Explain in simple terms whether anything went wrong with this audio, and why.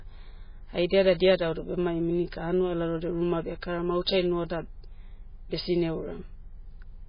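The speech was likely squeezed hard by MP3 compression, which throws away detail to save space. From start to finish nothing above 5.1 kHz survives, so the speech sounds dull and muffled, with a heavy watery, swirly quality where faint detail flickers.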